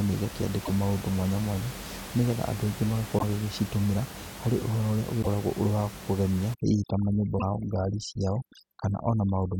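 At 0.64–0.70 s, 3.18–3.23 s and 5.21–5.27 s the speech lurches forward with a brief blip, and the same thing happens again at 7.38–7.43 s. That's likely a broken MP3 bit reservoir: frames went missing, and the next ones reached back for borrowed data that wasn't theirs. Each glitch lasts about two frames, which fits MP3's 26.1 ms frame length. From 6.54 s to the end, overdone noise removal kicks in. The room noise, which sat about 14 dB under the speech, drops and breaks up into twinkly specks, and the quieter parts of the speech are stripped away.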